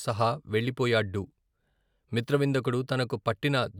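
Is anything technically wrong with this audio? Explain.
No, nothing technically wrong.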